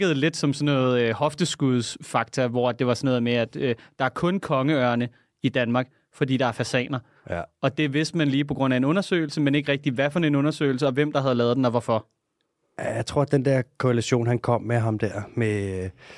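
No technical faults are audible.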